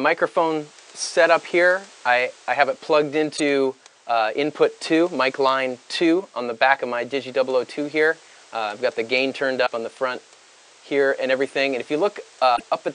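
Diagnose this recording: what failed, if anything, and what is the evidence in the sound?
Looks like a codec-stage problem: three short glitches where the audio skips forward, at 3.36 to 3.40 s, 9.65 to 9.68 s and 12.55 to 12.61 s. Each lasts roughly one or two 26.1 ms frames, which points to a likely broken MP3 bit reservoir. Frames went missing, so the next frame reached back for borrowed data and decoded someone else's bytes, giving a brief chirp, noise burst or hole before decoding recovered.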